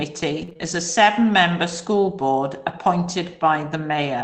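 Between 0.41 and 0.67 s there's repeated packet loss with that robotic edge: what sounds like four quick dropouts, the longest about 21 ms, each patched by stretching the previous sound. Around 70 ms gets rebuilt that way, so the speech turns choppy with pieces missing. The band-limited top end fits a call codec like Opus running at 8 kHz bandwidth.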